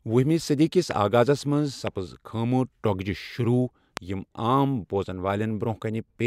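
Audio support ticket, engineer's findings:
Loud pop x3, single sharp transients at 0.91–0.93 s (after "وہمہِ صدی کِس"), 1.87–1.89 s, 3.97–3.99 s (after "ٹۄگجہ شروع"), peaks about 15, 10, 20 dB over speech, which continues underneath. Likely voltage pulse from plug, switch, static or driver glitch.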